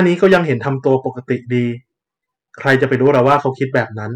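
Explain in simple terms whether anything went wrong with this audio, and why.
Hard clipping distorts the speech from the start to 0.94 s and again from 2.67 to 3.80 s. The sound was too loud, so peaks were chopped flat, causing crackle on the peaks.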